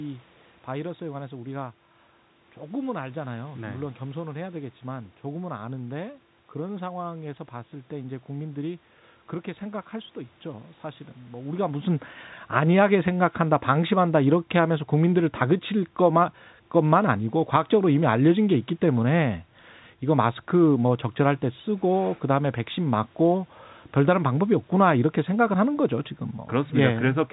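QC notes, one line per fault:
No system faults are present in this speech clip. The level shift near the 11.5 s mark comes from the talker moving relative to the microphone, and the narrow telephone band of the G.711 mu-law coding holds nothing above 4 kHz.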